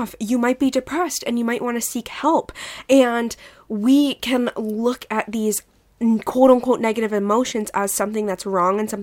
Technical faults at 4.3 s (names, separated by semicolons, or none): none